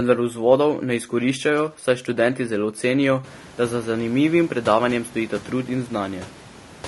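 Speech that sounds rough and grainy from start to finish, with a hiss-like fill between the pitch harmonics and a dulled, synthetic top band. The likely cause is low-delay AAC compression of the AAC-ELD kind used for video calls: its short frames resolve harmonics poorly, and the damage level fits a bitrate near 32 kbps. The room noise rising by about 21 dB around three seconds, staying about 23 dB below the speech, belongs to the recording itself.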